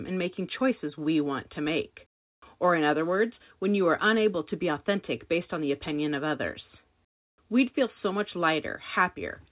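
No faults present; the speech has passed through a call path whose band-limiting to 4 kHz fits a narrowband G.711 mu-law link, and nothing beyond that stands out.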